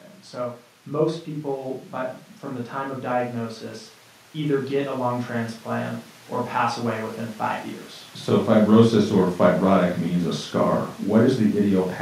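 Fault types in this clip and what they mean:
Automatic gain rising: the automatic gain control judged the input too quiet and eased its gain upward, by about 3 dB between 4.33 and 5.97 s, so the speech and the background noise swell together across those 1.6 seconds.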